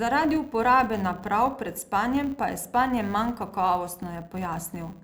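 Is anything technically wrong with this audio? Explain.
Yes. Throughout the speech, a filter is restarted on every block: it discards its stored state at each block boundary and starts again from silence, so each 10 ms block opens with a small transient, heard as a 100 Hz buzz that rises and falls with the speech level.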